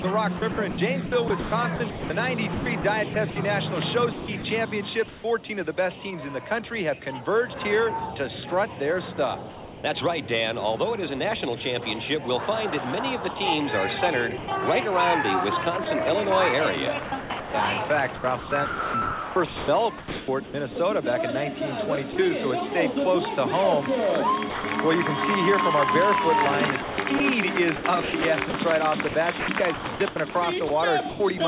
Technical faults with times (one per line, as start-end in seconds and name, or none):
0.02-5.24 sound chopped by the voice detector
9.50-9.84 sound dropped by the voice detector
13.34-14.48 sound chopped by the voice detector
15.84-20.76 sound chopped by the voice detector
22.12-22.16 sound dropped by the voice detector
24.50-24.64 sound dropped by the voice detector
26.82-31.40 sound chopped by the voice detector